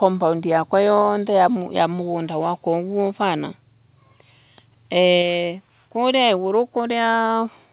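At 1.02 s the speech level drops by about 1 dB in a single step, and at 5.22 s it drops again by about 3 dB. Each step is likely a microphone volume stepped down by the call software. Speech and background fall together, and the lower level then holds. That sets it apart from a compressor or noise gate, which would pump back up. Everything stays band-limited below 4 kHz by the G.711 call path.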